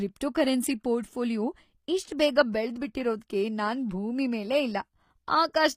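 Throughout the speech, the treble is plainly damaged. S sounds come out gritty, metallic or lispy. The likely cause is HE-AAC compression near 24 kbps.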